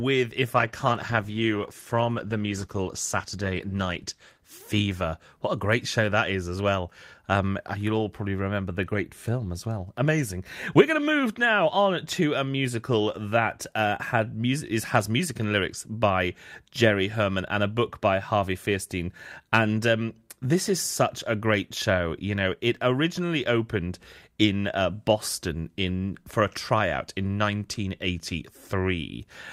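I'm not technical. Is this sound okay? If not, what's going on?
No. From about 0.57 to 6.15 seconds there's a call bitrate drop: the connection squeezed the speech into far fewer bits, so it turns rough and muffled, worst for nearly four seconds, before clearing up once the bandwidth recovers.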